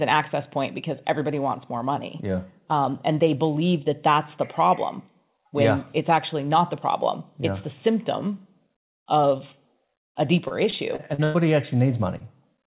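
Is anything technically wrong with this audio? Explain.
Yes, there are two packet-loss faults.

From 10.48 to 11.36 s there is repeated packet loss, heard as robotic sound. Five gaps fall close together, the longest about 0.1 s. Each is patched by extending the preceding sound, so roughly a quarter of that stretch is synthetic, giving a choppy texture. The repetition across the stretch sets it apart from an isolated dropout.

From 12.18 to 12.22 s there is a short concealed packet loss. About 20 ms of audio is missing, filled by continuing the last sound and then blending back. It comes across as a brief smear or wobble. Unlike the earlier stretch, it is a single event and never turns robotic.

The call path itself carries nothing above 4 kHz, which fits a narrowband G.711 mu-law connection.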